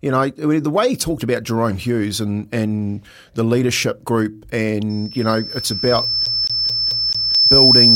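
Speech with two overlapping problems. Right after "and the leadership group" at 4.89 s, loudspeaker feedback squeal kicks in: a 5.3 kHz tone builds over roughly two seconds and stays to the end, ending up about 10 dB above the speech, because the mic is hearing its own speaker. From 6.26 to 7.35 s a CD is stuck on one turn, the same 0.22 s chunk repeating five times with a short mute at each jump back.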